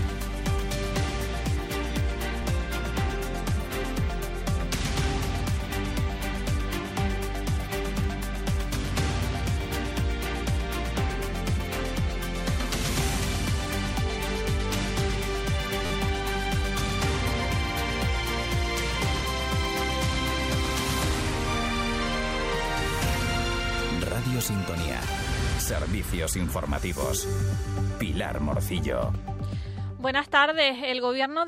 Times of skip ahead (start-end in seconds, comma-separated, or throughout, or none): none